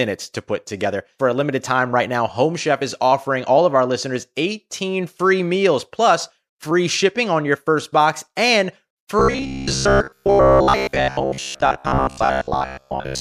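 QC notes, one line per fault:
9.19–13.21 s, robotic sound from repeated short buffers: a steady 66.8 Hz metallic buzz, likely a 15 ms chunk looped over most of the audio, not a stutter.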